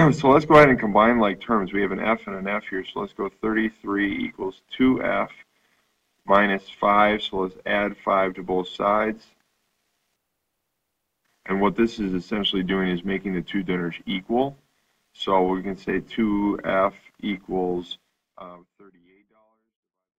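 No technical faults are present; the only level change is an editor's smooth fade-out from about 18 s to the end, with no click or hard edge.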